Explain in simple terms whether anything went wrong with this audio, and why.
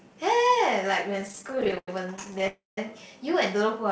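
Between 1.21 and 2.43 s the speech hits a run of repeated stalls (stutter). It hiccups 26 times, with the longest hold about 91 ms, so the speech keeps catching and dragging. What happened is that the pieces of audio kept showing up late, the receiving end ran out of audio to play, and each time it just stretched the last bit of sound to cover the gap. Around a third of a second gets padded out that way, roughly a quarter of that stretch, but nothing is actually lost.

Right after, from 2.47 to 2.78 s, there's a call audio freeze. The sound hangs for about 0.3 s. It first carries on as a fading smear of the previous sound, then drops to silence for roughly 0.17 s before the speech picks up exactly where it left off. The likely cause is that the audio got held up on its way across the network, so the player had nothing to play and simply waited.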